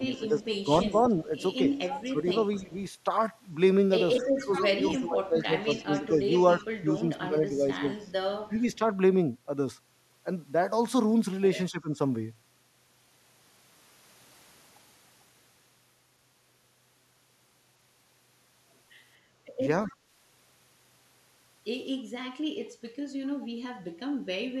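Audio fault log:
0.00–2.73 s, 4.36–8.81 s, 11.71–11.94 s and 19.87–19.94 s, speech suppressed in double talk: the level drops by up to about 10 to 15 dB in short bursts, likely from an echo canceller turning down both talkers during overlap. The waveform shows abrupt notches.
0.13–2.81 s, 4.18–8.77 s and 19.92–19.96 s, echo leak: a faint copy of the speech trails it by 256 ms at about 15 to 30 dB down, likely leftover loudspeaker echo. On the spectrogram it appears as a fainter, right-shifted duplicate of the harmonic pattern.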